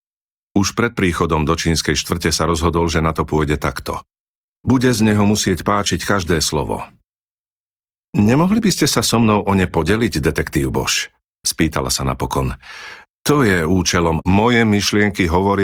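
From 2.44 s, right after "príchodom do čínskej štvrte", the speech abruptly drops in quality with more codec artefacts, with no gap, until 14.44 s. This is an adaptive stream at a lower bitrate, consistent with a drop from about 64 to 24 kbit/s Opus.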